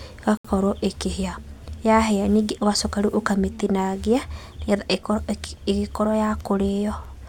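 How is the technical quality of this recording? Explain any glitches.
The speech drops out once, near the very start: from 0.37 to 0.45 s the sound cuts abruptly to silence for 72 ms, then resumes where it left off. That gap is likely a Bluetooth stall. Radio interference delayed packets on the wireless link, the headphones' small playback buffer emptied before the retransmitted packets reached it, and output simply halted until they arrived. It is heard as a brief, hard hole in the audio rather than a fade or a click.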